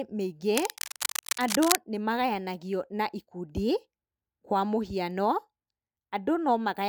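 From 0.55 to 1.75 s, a dense, uneven scratching and rustling sits over the speech, loud enough to rival it at only a few decibels below the speech level. This is cable scratch noise. The likely cause is a worn cable, connector or control being moved during recording. Its contact resistance jumps about rapidly, and each change throws irregular bursts of noise into the signal for as long as the movement lasts.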